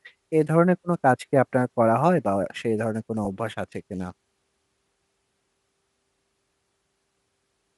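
From start to finish the speech carries a plainly audible grainy, breathy edge on its upper frequencies. Sibilants and vowel tops sound partly made of noise rather than clean detail. The likely cause is Bluetooth LC3 compression. The encoder has discarded parts of the upper spectrum and filled them with shaped noise, and the texture suggests a moderate bitrate around 48 kbps with 10 ms frames. Unlike a simple low-pass filter, the highs are not just dulled. They remain present but turn rough and hissy.

At 3.25 s and again at 5.29 s there is a brief smeared blip, each about 10 ms long. These are lost LE Audio frames. The decoder filled each gap by repeating the previous spectrum with scrambled phase, which produces a momentary noisy blur rather than a hard click or a cut to silence. Because each loss covers only one frame, no gradual fade-out follows. That brief noisy smear is what sets these apart from ordinary dropouts.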